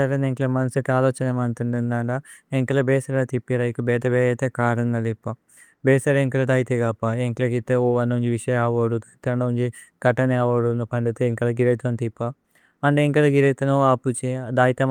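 No technical faults can be heard anywhere in the recording. The speech carries on without any interruption or disturbance throughout.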